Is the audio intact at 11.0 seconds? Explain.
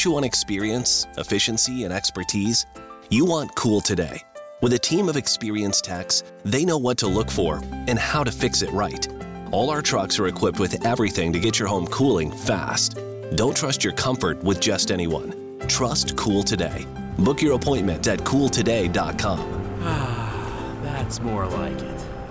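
Yes, at 11.0 seconds the audio plays through cleanly, with no dropout, click, distortion or other break in the signal.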